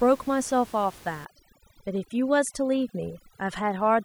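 From 1.25 s to the end, overdone noise removal takes hold. Bands near the noise estimate are pulled down hard, leaving twinkling specks.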